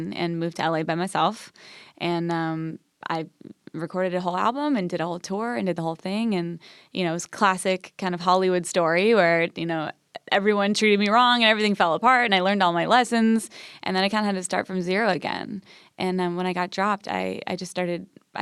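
Nothing in the recording points to a technical fault at any point, with the signal holding steady throughout.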